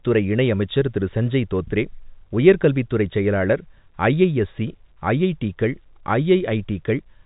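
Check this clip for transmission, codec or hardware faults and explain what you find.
No transmission, codec or hardware faults found; the speech sits on a G.711 telephone path, which accounts for the band stopping at about 3.8 kHz.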